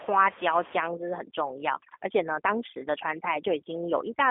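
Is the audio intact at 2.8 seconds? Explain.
No. At 2.8 s two faults overlap. The first is the G.729 codec, which runs through the whole clip. It rebuilds the speech from a vocal tract model, a pitch predictor and a handful of pulses per frame instead of sending the waveform itself. The result sounds rough and slightly synthetic, which fits an 8 kbit/s stream. The band is squeezed to roughly 300 Hz to 3.5 kHz. On a spectrogram, everything above about 3.7 kHz is empty and the low end is trimmed, so the speech sits in a narrow horizontal strip.

The second is overdone noise removal, active from 0.86 s to the end at 4.31 s. The room noise is about 18 dB below the speech, and the suppressor estimates that noise and then cuts any frequency band near that level, taking quiet parts of the speech with it. The background drops to near silence dotted with twinkling specks. On a spectrogram the gaps between syllables turn almost black, scattered with isolated bright dots, while the speech harmonics look ragged and patchy at their edges.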